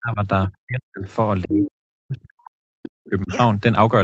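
From 0.0 to 0.21 s and again from 0.48 to 1.08 s, the speech sinks by up to about 40 dB in what is likely speech suppressed in double talk. The echo canceller, unable to separate the talker from loudspeaker echo, ducks everything. The waveform shows sudden near-flat gaps, and the spectrogram shows blank columns.

Between 1.06 and 1.13 s, a brief scrap of the other side's voice leaking through appears, about 30 dB below the speech. This is likely residual loudspeaker echo that the canceller missed. It shows as a faint smear on the spectrogram, barely visible in the waveform.

The suppression returns from 1.44 to 2.56 s, its longest stretch at about a second, and again from 2.76 to 3.32 s. Each time the level drops by up to about 40 dB, leaving deep notches in the envelope, all beneath the call path's 8 kHz ceiling.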